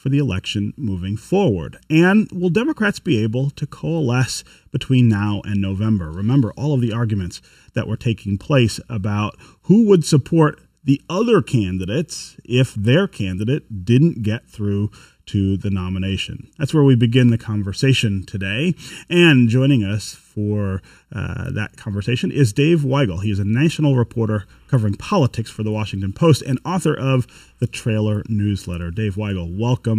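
Hollow, phasey speech runs from start to finish, with a fixed coloration that never shifts. It is channel delay (comb filtering): one channel lags by well under a millisecond, so the mono sum cancels near 700 Hz and at evenly spaced points above.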